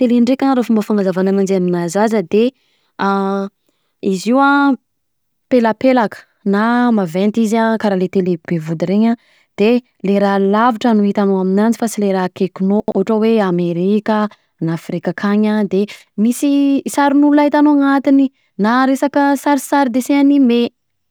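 At 12.8 to 12.92 s, chunks out of order: one 40 ms chunk plays two chunks late, producing a brief jumbled stretch with three hard joins.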